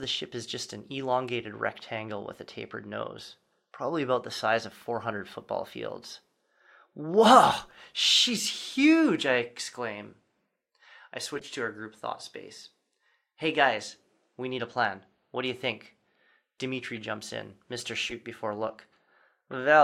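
Corrupt frame decoded at 11.35–11.46 s, 16.95–16.98 s, 18.09–18.12 s and 19.51–19.54 s. Damaged compressed frames were played anyway, so misread gains and codes put energy at the wrong frequencies. Each is heard as a short chirp, squeak, blip or burst of noise over the speech.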